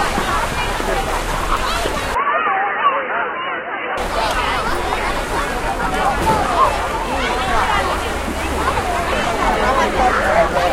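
From 2.15 to 3.97 s the sounds abruptly narrow to nothing above 3 kHz, drop about 5 dB, and gain a faint new noise floor roughly 40 dB down, with no gap at either change. This is likely an input switched to a poorer device.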